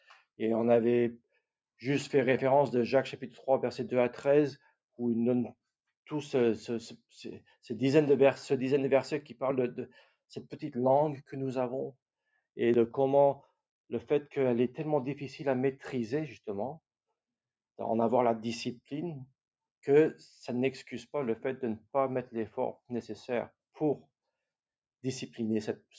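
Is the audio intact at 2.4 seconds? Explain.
No. At 2.38 s there is a small forward jump in the sound, likely a dropped buffer (overrun) that discarded roughly 20 ms and spliced the edges together.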